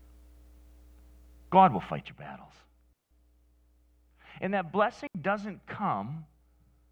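At 2.93 s the speech drops into a clean hole of near silence that lasts about 0.18 s, until 3.11 s. A second hole follows at 5.07 s, lasting about 0.08 s. Both are digital wireless dropouts. The radio link lost too much data, so the receiver muted its output with a very fast fade. Nothing hisses or crackles at either edge. The sound simply stops, then returns.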